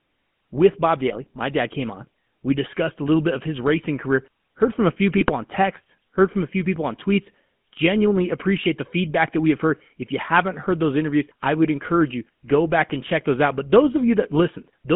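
A speech recording carried over a GSM full-rate codec for its whole length. The sound has the characteristic buzzy, gravelly roughness of that codec, which fits the 13 kbps full-rate scheme: the vocal tract is modelled as a filter and driven by a coarse, decimated pulse excitation, so fine detail in the voice is replaced by a regular rasp. The channel is also confined to a telephone band of roughly 150 Hz to 3.4 kHz, leaving the voice thin and lacking both low body and upper presence. The codec damage is plainly audible throughout. GSM bit errors break through twice, from 1.10 to 1.17 s and from 5.17 to 5.32 s. Corrupted bits are reaching the decoder and upsetting its filter, pitch and gain parameters for a few frames at a time, which bends the spectrum and throws the level around. The result is a brief squawking, gargling burst, short in the first case and more extended in the second, where the disruption spans a longer stretch of frames.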